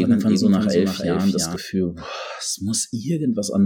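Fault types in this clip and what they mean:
Doubled audio track: From the first moment the speech has a second, full-band copy of itself trailing roughly a third of a second behind, a few decibels quieter than the original, with no decay or room colour, so it reads as a flat stutter rather than an echo. It is already running when the clip opens and cuts off abruptly at 1.56 s. The likely cause is the same signal being captured twice, once through a slower path.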